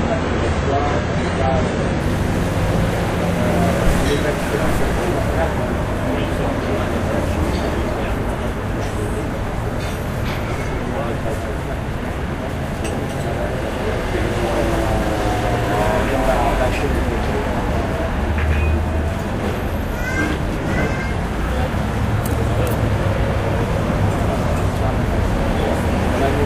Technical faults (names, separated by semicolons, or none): adaptive stream starting at a low bitrate